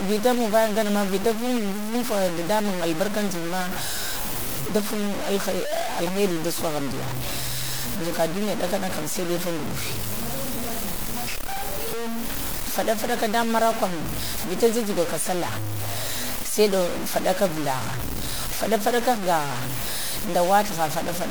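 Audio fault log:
Throughout, low bit depth without dither: harsh grainy distortion tracks the speech, and quiet parts sputter or drop out. Likely truncation to about 4 bits.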